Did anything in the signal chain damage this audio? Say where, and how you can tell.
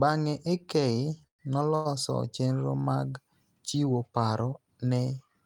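Yes: call audio freezes at 1.27–1.41 s and 1.75–1.87 s, likely network delay. Sound stretches into buzz or silence, then resumes intact, unlike packet loss.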